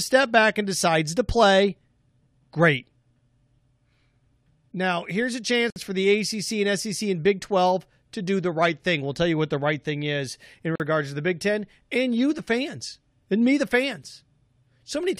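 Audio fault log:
5.70–5.76 s and 10.76–10.80 s, gap at a join of encoded pieces: gaps of 58 ms after "here's a" and 44 ms after "right thing is in" come from encoder start delay and last-frame padding left in at the joins. Unlike a dropout, the edges are smeared and the speech resumes exactly where it stopped, with nothing lost.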